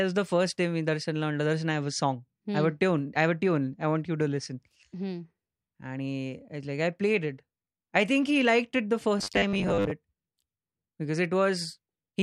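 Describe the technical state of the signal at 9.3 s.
At 9.3 s new audio is likely arriving too seldom, so a 10 ms buffer repeats over about half of 9.19–9.92 s after "he liked it the", giving robotic sound from repeated short buffers: a rigid 100 Hz metallic buzz.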